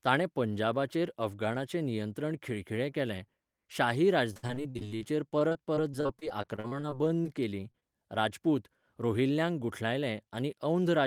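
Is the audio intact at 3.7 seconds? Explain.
Yes, the audio is intact at 3.7 seconds, with no dropout, glitch or other fault audible at that point.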